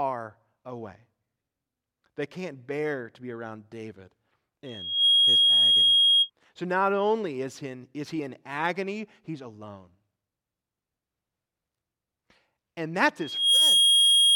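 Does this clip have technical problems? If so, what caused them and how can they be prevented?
Yes. In a loudspeaker feedback squeal, the microphone picks up its own loudspeaker and loop gain exceeds one near 3.3 kHz. Within a fraction of a second a tone swells well above the speech, at 4.65–6.30 s and from 13.20 s to the end. Prevent it by lowering gain, moving the microphone away from the loudspeaker, or notching 3.3 kHz.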